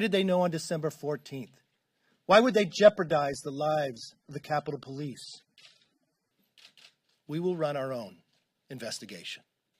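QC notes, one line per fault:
2.31–6.31 s, adaptive stream at a lower bitrate: speech abruptly loses its top end, with nothing above 13.1 kHz, and codec artefacts thicken, with no gap at either switch. This fits the player dropping to a lower-bitrate AAC rendition, around 24 kbit/s from 96 kbit/s, during a bandwidth dip.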